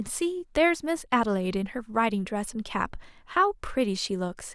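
Nothing in this bit of speech trips any alarm, with no glitches, dropouts or odd artefacts turning up anywhere along the way.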